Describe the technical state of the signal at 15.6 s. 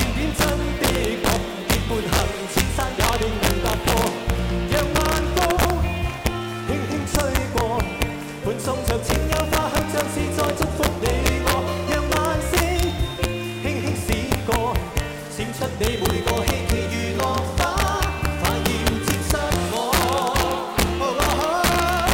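At 15.6 s, as throughout the clip, integer overflow is present: peaks driven about 3 dB past full scale wrap to the opposite sign, causing violent cracks far sharper than clipping's flattened distortion.

Sample clock jitter also runs throughout: a clock wandering by a few microseconds mistimes samples, adding hiss roughly 20 dB down that tracks loud, bright passages, unlike steady background noise.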